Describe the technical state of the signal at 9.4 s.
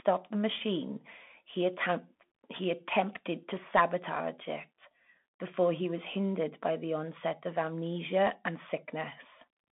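At 9.4 s, as throughout the clip, the speech carries Bluetooth CVSD headset codec damage. The one-bit delta coding, which fits a 64 kbps stream, leaves granular hiss and scratchy sibilants. A spectrogram shows a band of roughly 200 Hz to 3.5 kHz, with nothing above 3.8 kHz.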